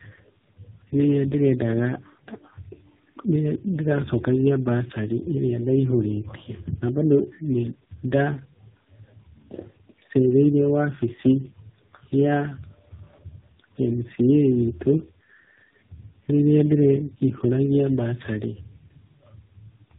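Speech clip with tandem speech coding throughout: it was decoded and re-encoded across successive codec links, fitting a chain ending in AMR-NB, so it sounds rough, muffled and warbly, with nothing above 3.6 kHz.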